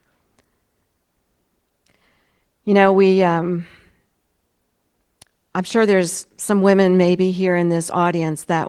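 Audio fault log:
Nothing to log here, since the speech just rolls along through its Opus voice compression without a single fault turning up.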